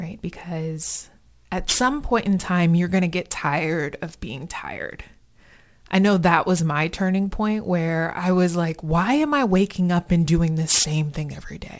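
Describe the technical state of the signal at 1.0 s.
At 1.0 s the speech carries aliasing, present across the whole clip: content above 8 kHz folds back unfiltered, fitting an unfiltered drop to a 16 kHz rate, leaving gritty, metallic sibilants, with the folded products roughly 15 dB below the signal.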